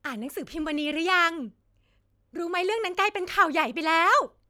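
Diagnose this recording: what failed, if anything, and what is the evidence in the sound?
Two sharp clicks cut through the speech, at 1.09 s and 3.62 s, each a thin vertical line across the spectrum. These are likely dropped samples at the driver or buffer stage. A handful of samples, a fraction of a millisecond, went missing, so the waveform jumps abruptly.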